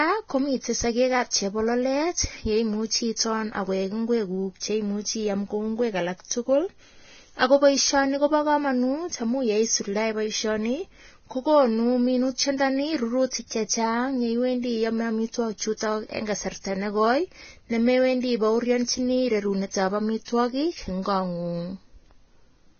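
Heavy Vorbis compression is the likely cause throughout the speech, at a rate pointing to about 17 kbps. The encoder removes everything above 6.5 kHz and quantises the remaining treble so coarsely that detail becomes noise, sounding hissy and grainy with blurred attacks.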